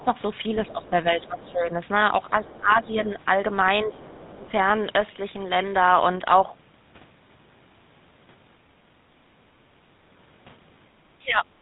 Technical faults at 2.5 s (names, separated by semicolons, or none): GSM full-rate codec; speech suppressed in double talk; other side's voice leaking through